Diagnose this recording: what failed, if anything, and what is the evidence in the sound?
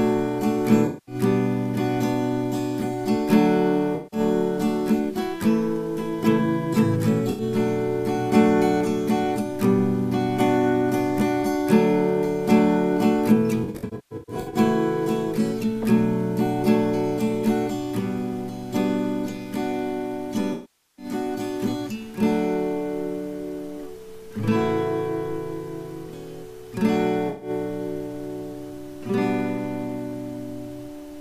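Codec stage: AAC frame loss with concealment at 0.86, 3.95, 7.30, 13.64, 20.53 and 27.29 s, losing 0.09 to 0.62 s each. Unlike a plain dropout to silence, the decoder fills each hole from the last good spectrum. The 13.64 s loss is scattered over about 0.9 s.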